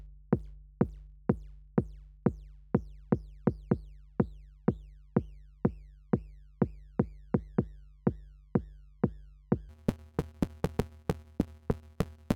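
A block size mismatch (truncated) runs from 9.69 s to the end at 12.36 s. Each block one stage writes, which fits about 512 samples, is longer than the next stage reads, so every block's tail is dropped, giving a 150 Hz buzz and audio rushing 1.6 times fast at near-normal pitch.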